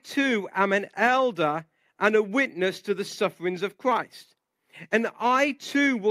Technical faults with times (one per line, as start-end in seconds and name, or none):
none